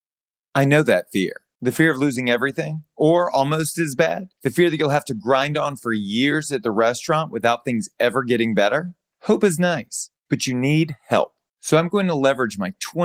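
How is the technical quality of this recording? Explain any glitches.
Listening through the recording, nothing stood out as a glitch or technical problem worth pointing to.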